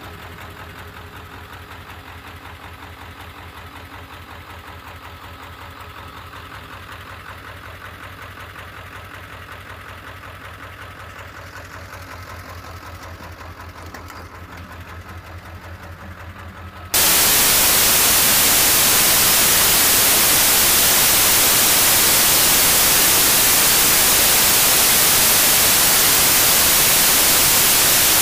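From 16.94 s to the end, the samples are built from the wrong bytes: each value is assembled with a byte offset, swapped byte order or wrong alignment, so the rapidly changing low bits land in the high positions. The sound gives way to loud, harsh broadband noise.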